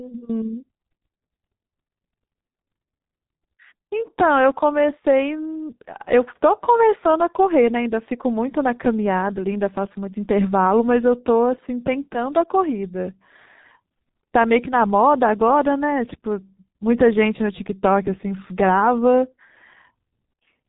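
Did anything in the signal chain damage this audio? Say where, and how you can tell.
Yes, at the codec stage: heavy G.723.1 codec damage throughout. A spectrogram is empty above 3.8 kHz, and its 30 ms frames smear consonants into a muffled, hoarse sound that fits a roughly 6 kbit/s stream.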